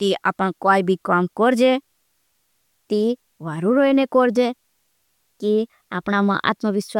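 No technical faults can be heard at any point in the recording.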